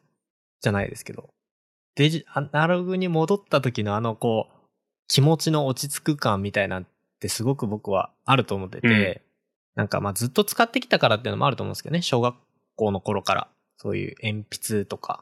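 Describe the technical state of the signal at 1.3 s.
At 1.3 s the speech signal is intact, with no audible fault at that moment.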